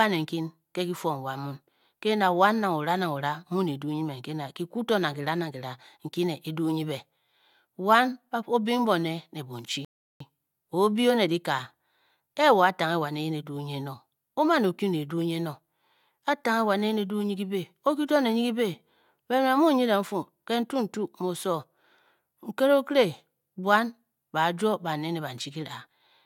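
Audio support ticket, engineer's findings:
Rebuffering stall, 9.85 to 10.20 s. Playback buffer ran dry and the player stopped until more data arrived. Speech cuts to silence right after "bing bone ne bonchi", then resumes exactly where it left off. No content lost; roughly 0.36 s of dead air added to the timeline. Points to the delivery or network side starving the client buffer, not a decoder fault.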